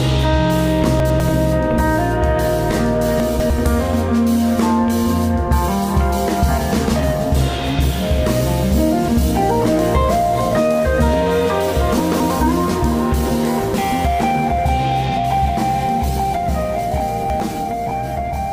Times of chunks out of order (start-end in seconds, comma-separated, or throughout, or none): 1.00-1.20, 3.20-3.50, 12.00-12.30, 17.00-17.40